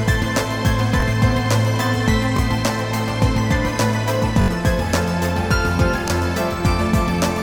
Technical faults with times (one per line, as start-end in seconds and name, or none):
1.00-1.02 repeated buffer
2.37-2.39 repeated buffer
4.42-4.48 repeated buffer
6.08-6.10 repeated buffer